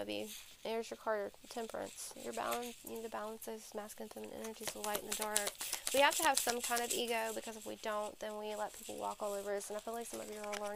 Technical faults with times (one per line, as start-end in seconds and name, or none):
none